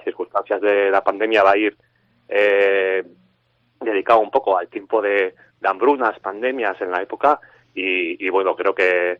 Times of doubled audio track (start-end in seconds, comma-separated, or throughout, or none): none